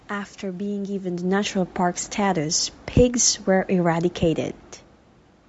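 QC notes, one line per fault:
Throughout: Bluetooth LC3 compression is the likely cause of the plainly grainy, breathy edge on the speech, with noise filling the thinned upper spectrum. This fits 48 kbps with 7.5 ms frames.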